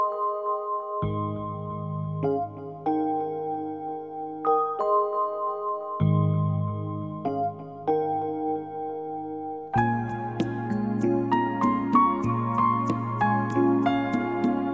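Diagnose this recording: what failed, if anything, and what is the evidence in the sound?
Nothing failed in this recording, and there is no audible evidence pointing to a problem at any stage of the chain. No stage needs further diagnosis.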